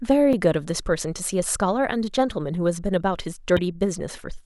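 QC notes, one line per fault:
0.33 s and 3.56–3.59 s, damaged data in a compressed stream: two brief glitches cut through the speech, the first a tiny blip and the second about four times longer. At each point the compressed data was corrupted, so the decoder misread the affected frames and lost sync until it found the next valid frame header, which is why each is heard as a sudden break rather than part of the speech.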